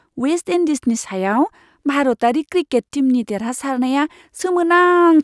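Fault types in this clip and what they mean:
No faults turn up anywhere in this speech clip, so there's nothing here to list or explain.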